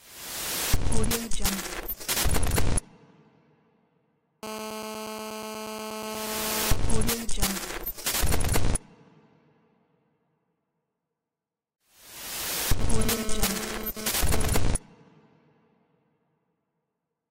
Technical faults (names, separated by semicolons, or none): GSM phone buzz